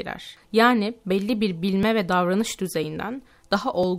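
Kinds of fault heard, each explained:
Periodic USB or driver dropouts: a background task stalls the USB bus or audio driver every 1.0 s, skipping a couple of milliseconds of audio each time, so about three evenly spaced ticks cut into the speech from 1.83 to 3.83 s, just after "belli bir".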